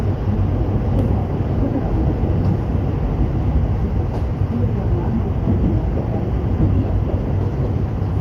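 No technical faults can be heard anywhere in the recording.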